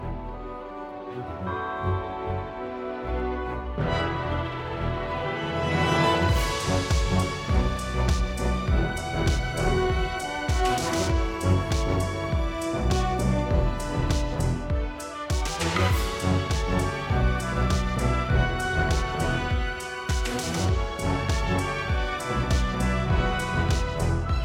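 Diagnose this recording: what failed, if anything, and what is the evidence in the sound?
Nothing in the capture, conversion, processing or playback chain gives an audible sign of failure, so there is no fault to diagnose.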